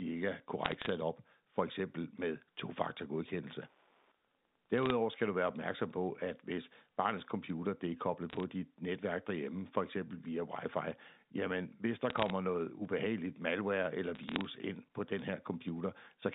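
Speech over a telephone-band line, with audio limited to roughly 200 Hz to 3.7 kHz, carries two faults. Bit errors on a digital phone line cause short bursts of sharp ticks and crackle at 0.65–0.89 s, 4.78–4.90 s, 8.30–8.43 s (between "computer det er koblet" and "dit netværk derhjemme for"), 12.10–12.30 s and 14.15–14.45 s (after "noget ubehageligt malware eller", before "ind på den"). Each flipped bit corrupts a single logarithmically coded sample. At an error rate of a fraction of a percent, a hit on the sign or top bits throws that sample far off, so the waveform shows isolated one-sample spikes and the spectrogram shows thin full-band vertical lines over unchanged speech. Wi-Fi interference runs from 3.29 to 5.29 s, ending before "du være opmærksom på". A nearby radio's beacon, picked up and rectified by the audio circuitry, produces a faint ticking every 102.4 ms, close to ten per second. 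It sits very low, around 45 dB under the speech, and appears on a spectrogram as an evenly spaced comb of faint vertical striations and in the waveform as small regular pulses.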